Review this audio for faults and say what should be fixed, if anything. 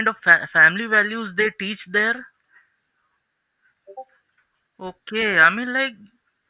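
Nothing to fix: no audible faults anywhere in the speech recording.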